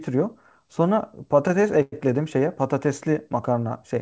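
From 1.82 to 1.94 s the speech stretches into a fading buzz, briefly silent, then resumes intact but 0.1 s late: a call audio freeze, likely from the jitter buffer running empty.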